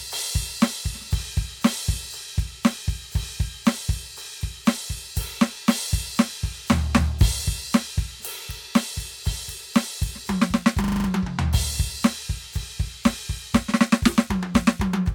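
A music clip that, from 10.84 to 11.08 s, suddenly freezes into a rapid, rattling stutter: one 40 ms sliver of the music repeats exactly six times, giving a buzzy flutter at 25 Hz before playback resumes with little or no music missing. This is a system hang loop. The computer or its audio driver stalled, and the sound hardware kept replaying the same small ring buffer, which fits a buffer holding about 40 ms of audio.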